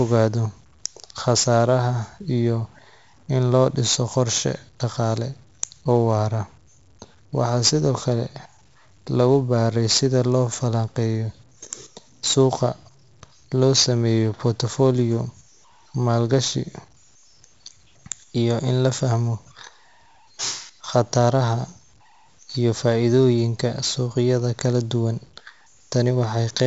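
From start to finish the speech carries a grainy, crunchy edge that shifts with the sound and turns quiet passages into sputtering grit. This is low bit depth without dither, likely truncation to about 9 bits, leaving rounding error roughly 40 dB below the signal that tracks the waveform.

Also throughout, every louder stretch is coated in a gritty hiss that rises and falls with level, sharp onsets smear into distortion, and the top is dull with nothing above 7.7 kHz. That is heavy 4-bit ADPCM compression at 64 kbps, which fits a 16 kHz sample rate.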